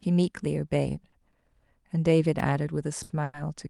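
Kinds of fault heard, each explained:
Short stall from a late packet: at 1.09, 1.31 and 3.03 s the jitter buffer ran dry and the receiver held the last sound for about 30, 20 and 70 ms. It then resumed in place, so nothing is lost, only a brief stretched, slightly buzzy hold.
Electrical switching spike: at 2.40 s a sharp snap sits on top of the speech, lasting under 10 ms. It is a short arc-like transient added to the signal, likely from a nearby switch, motor or static discharge coupling into the audio line.
Call audio freeze: at 3.24 s playback stalls for about 100 ms, with the last sound carried on as a decaying buzz rather than dropping to silence. It is likely caused by packets being held up in transit. Audio resumes where it stopped, inserting a gap without losing content.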